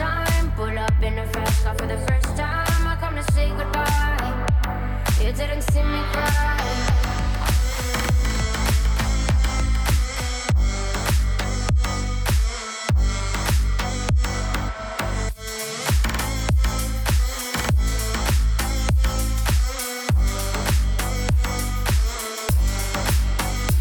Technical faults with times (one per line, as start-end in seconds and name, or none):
6.84-10.52 doubled audio track